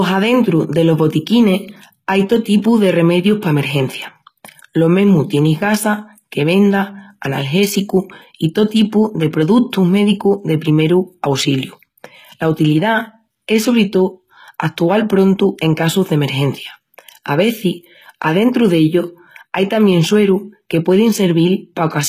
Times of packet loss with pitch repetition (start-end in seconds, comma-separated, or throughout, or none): none